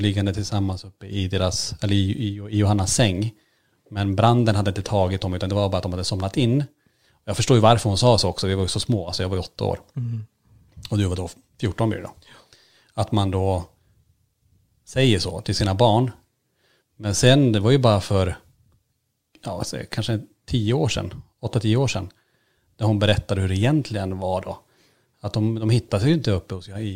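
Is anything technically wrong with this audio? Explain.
No, nothing technically wrong can be heard here.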